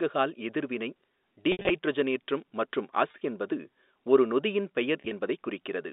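Brief buzzy, held stutters at 1.52–1.70 s, 3.09–3.21 s (just before "என்பது ஒரு நொதியின்") and 5.01–5.11 s (just after "என்பது ஒரு நொதியின்") come from packet loss with pitch repetition. Scattered gaps of up to 70 ms were filled by looping the last pitch period, all over a 250 Hz to 3.7 kHz telephone band consistent with G.711 coding.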